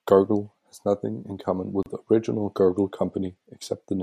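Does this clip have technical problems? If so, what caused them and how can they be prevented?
Yes: a gap at a join of encoded pieces, a 33 ms silence at 1.83 to 1.86 s after "has nothing in common", from untrimmed encoder delay and padding between separately encoded 2 s pieces. Prevent it by trimming each piece's delay and padding, or encoding the audio in one continuous pass.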